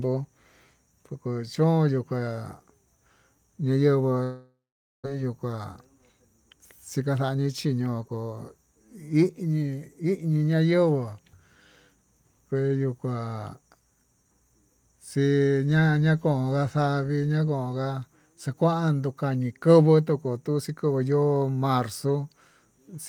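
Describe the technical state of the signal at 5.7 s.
At 5.7 s the speech is inside a jitter buffer speed-up running from 5.15 to 6.10 s. After a backlog built up, the receiver cut short pitch-period-length pieces repeatedly, roughly 70 ms in all. Playback runs at about 107% speed at unchanged pitch and sounds hurried.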